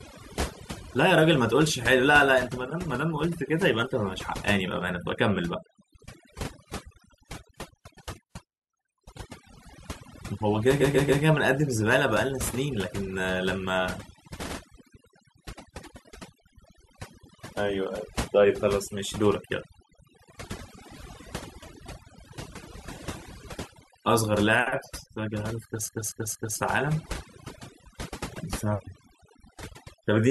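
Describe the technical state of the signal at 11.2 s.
At 11.2 s the sound is inside a stretch of repeated frames running from 10.80 to 11.22 s. A 139.3 ms block, which fits a run of about three compressed frames, plays three extra times and adds 418 ms. Each restart can carry a soft blip where the copies don't join. Unlike a dropout or concealment fade, nothing goes missing; identical sound simply recurs, which gives a mechanical stutter.

Overdone noise removal also sits under this moment, as it does across the whole speech clip. Aggressive suppression pulls frequency bands close to the noise estimate down or out, taking quiet parts of the voice with them. The result is a background dropped to near-silent gaps sprinkled with twinkling specks. Those specks fall where noise was removed, not across the voice itself as low-bitrate codec smearing would.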